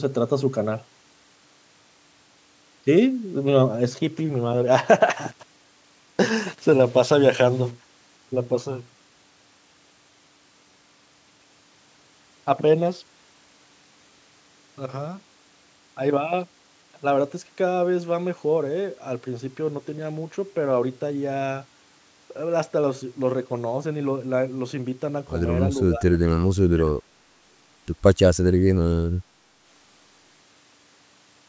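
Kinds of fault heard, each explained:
Low bit depth without dither: From 5.12 to 7.71 s the speech turns gritty, with grainy distortion that follows the voice and a noise floor only about 25 dB below it. That fits a signal likely rounded to around 7 bits with no dither.
Speech suppressed in double talk: Between 25.77 and 26.94 s the talker is turned down, dipping by as much as about 25 dB for roughly a second in total. The echo canceller likely couldn't tell the voice from far-end echo and turned both down.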